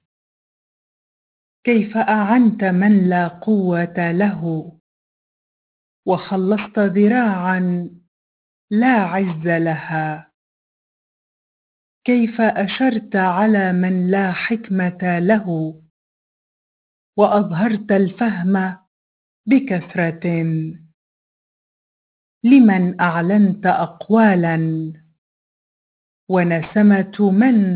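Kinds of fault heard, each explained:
Aliasing: the sound was resampled without an anti-alias filter, consistent with a drop from 44.1 kHz to 8 kHz, so everything above 4 kHz folds back to unrelated frequencies, giving a gritty, metallic edge throughout, with the folded energy roughly 25 dB below the signal.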